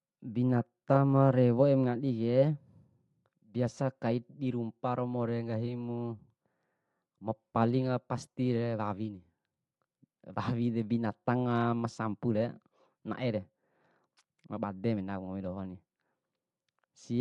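Bluetooth LC3 compression runs throughout the speech, giving it a plainly audible breathy, grainy edge. The likely cause is the LE Audio transform codec discarding upper-band detail and filling it with noise, which fits roughly 48 kbps coding in 10 ms frames.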